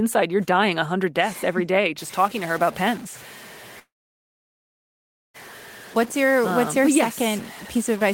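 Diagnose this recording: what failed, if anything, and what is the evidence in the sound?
From 1.98 s, just after "deaths every day", to the end of the clip, the speech turns distorted, and the pauses fill with a constant noise floor. This points to a stuck bit at the converter or digital interface, likely a broken data line. One bit held fixed offsets about half of all samples by its weight, and it flips with the sign of small values, so even near-silence turns to noise.

Between 3.79 s and 5.36 s the audio halts for about 1.55 s. A brief fading continuation gives way to roughly 1.47 s of silence, and then the speech resumes where it stopped with nothing dropped. This is a call audio freeze in the network and jitter-buffer stage, likely packets held up in transit. The buffer ran empty, the receiver concealed the gap, and the late packets played out, adding about 1.55 s of delay.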